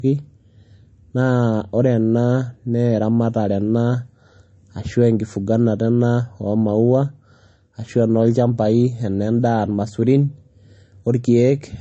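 Throughout, the speech sounds dull and smeared with nothing above 8.3 kHz, likely low-bitrate audio saved at a high bitrate, fitting a 32 kbit/s MP3 source.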